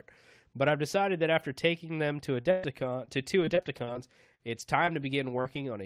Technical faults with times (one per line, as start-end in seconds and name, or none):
2.41-5.57 repeated packet loss (robotic sound)